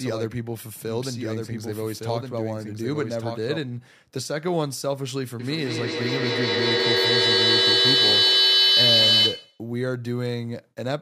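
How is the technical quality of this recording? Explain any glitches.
The recording has two distinct faults, one at the start and one in the second half.

From the very start until 3.58 s there is a doubled audio track: a full-band second copy, about 5 dB quieter, trails roughly a second behind and cuts off abruptly. It is likely a second, slower capture path mixed in. Unlike an acoustic echo, it appears only once, with no decay, thinning or room colour.

From 5.4 to 9.71 s there is feedback echo between two devices. Another device's speaker replays this microphone's signal, and the microphone picks it up again. The sound recurs roughly every fifth of a second, each pass thinner and more ringing. Unlike the doubled track, the repeats multiply and build up, peaking about 8 dB above the speech.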